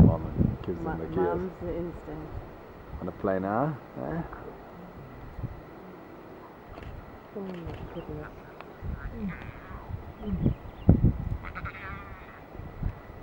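From start to finish a video or display buzz sits well beneath the sound: picture-circuit interference couples in as a 50 Hz field-rate buzz with hash above it, plus a 15.6 kHz line tone. A spectrogram shows steady 50 Hz harmonics and a thin high line.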